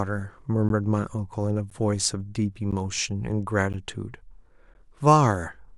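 The speech was delivered in one-second chunks, and a short silence was left at each join instead of the next chunk following seamlessly. This gap between chunks appears at 0.69, 1.70, 2.71, 3.73 and 4.74 s, each about 12 ms long and recurring roughly every second. No audio is missing; it is pushed later at each break. The result is a brief, hard-edged dropout that chops the speech in a steady rhythm.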